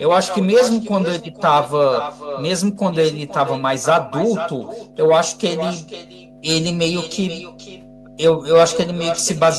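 A ground loop or nearby transformer couples 50 Hz mains into the signal from start to end, leaving a steady low mains hum roughly 20 dB below the speech. Throughout, the far end's loudspeaker feeds its microphone with no echo canceller, so every phrase returns around half a second later as a thinner copy about 11 dB down.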